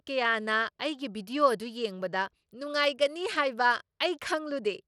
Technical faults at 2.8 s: Bluetooth SBC compression

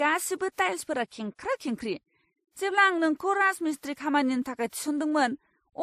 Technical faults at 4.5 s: transcoding between lossy codecs

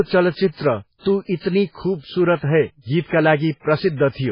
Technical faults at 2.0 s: MP3 compression

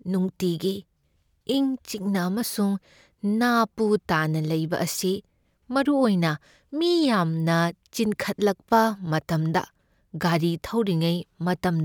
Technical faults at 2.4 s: none

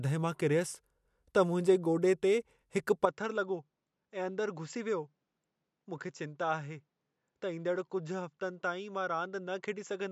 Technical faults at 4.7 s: input switched to a poorer device

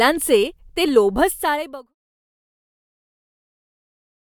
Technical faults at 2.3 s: none

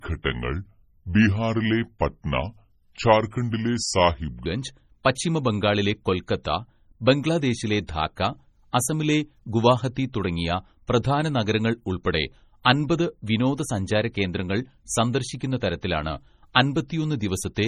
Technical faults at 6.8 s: MP3 compression

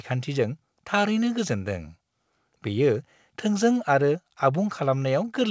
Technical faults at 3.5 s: none

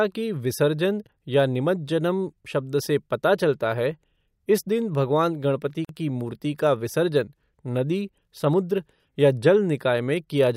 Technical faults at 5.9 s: gap at a join of encoded pieces

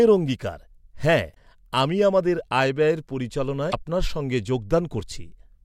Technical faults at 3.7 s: damaged data in a compressed stream

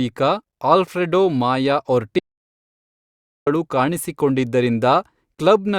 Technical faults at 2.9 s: audio dropout to silence

